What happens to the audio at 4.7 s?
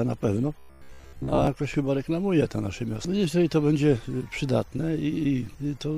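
Nothing goes wrong at 4.7 s; the audio plays through that moment intact, with no audible fault.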